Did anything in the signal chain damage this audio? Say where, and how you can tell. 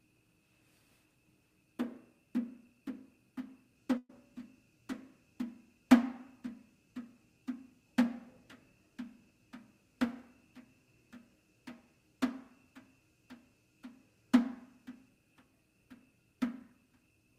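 Yes. From 3.97 to 4.10 s the sound freezes into a held, fading tail for 117 ms, the last 30 ms of it silent, then resumes further on. This is a burst of packet loss on the network. The receiver stretched out the last audio to cover 120 ms that never arrived.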